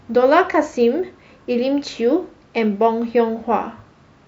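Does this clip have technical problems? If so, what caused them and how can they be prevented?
Yes: a resampler restarted on every block runs throughout the speech, as a 100 Hz buzz riding under the signal. Each 10 ms block was converted alone, which fits a 48 kHz to 44.1 kHz change, so every block edge carries a small error. Prevent it by keeping the resampler's state continuous across blocks.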